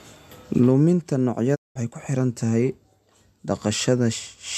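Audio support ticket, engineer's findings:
Digital broadcast dropout, speech, 1.54 to 1.77 s. Short 20 ms fade, then silence for about 0.2 s. Likely receiver muting on corrupt or missing frames. The gap fits roughly eight lost 24 ms frames. Audio from that gap is unrecoverable.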